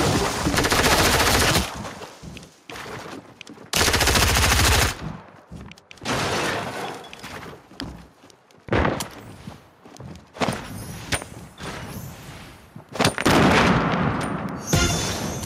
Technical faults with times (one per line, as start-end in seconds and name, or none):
0.00-15.46 gain pumping